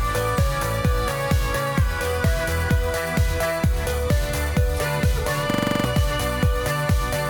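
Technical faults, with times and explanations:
5.50–5.85 s, system hang loop: the system stalls and the hardware keeps replaying one 42.7 ms chunk, which fits a 2048-sample buffer, eight times at 23.4 Hz. That gives a rapid, rattling stutter, and roughly a third of a second of real audio goes missing.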